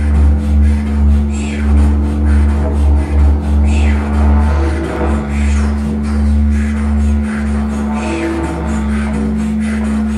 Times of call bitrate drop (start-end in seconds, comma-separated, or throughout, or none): none